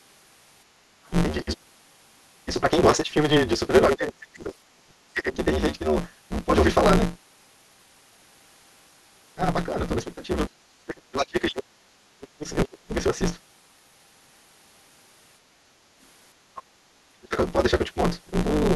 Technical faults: block size mismatch (truncated); other side's voice leaking through; speech suppressed in double talk

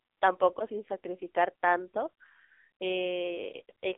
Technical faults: AMR narrowband mobile codec

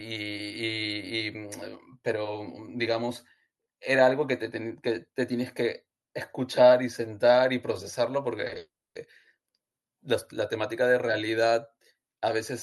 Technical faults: repeated packet loss (robotic sound); long network dropout

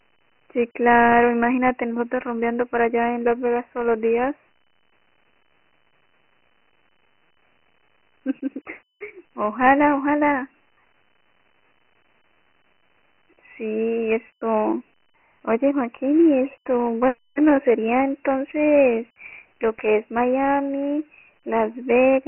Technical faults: Dialogic VOX ADPCM

